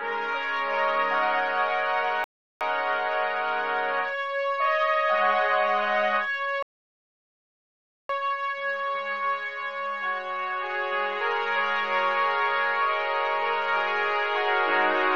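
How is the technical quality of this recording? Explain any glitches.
Playback is interrupted twice by rebuffering stalls. At 2.24 s the sound drops to silence for 0.37 s. At 6.63 s it stops again for 1.47 s. Each time the player ran out of downloaded audio and waited. Then the sound resumed exactly where it paused. Nothing is skipped, but time is added.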